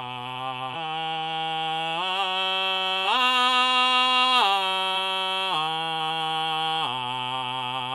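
Music with compressed frames skipped at 0.72–0.75 s, 3.04–3.07 s and 4.95 s: the music lurches forward roughly 150 ms, 200 ms and 100 ms, which points to a few whole 46.4 ms frames lost. Unlike a dropout, there's no silence.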